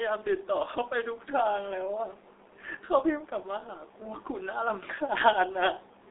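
Throughout, G.723.1 codec damage leaves nothing above 3.8 kHz and a hoarse, smeared texture with blurred consonants, beyond simple band-limiting, which fits a roughly 6 kbit/s stream.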